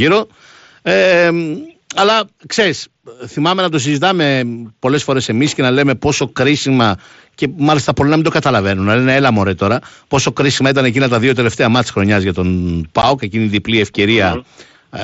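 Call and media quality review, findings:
Unconcealed Bluetooth headset packet loss, 13.02 s, headset–phone voice link. A 15 ms gap in voice packets, consistent with two lost frames, was filled with silence or an idle pattern because no concealment was applied. The result is a short hole with abrupt edges between "μάτια χρονιά για τον" and "εκείνη η διπλή". The link runs the mSBC wideband codec, so the audio band reaches 8 kHz, with light graininess on louder passages.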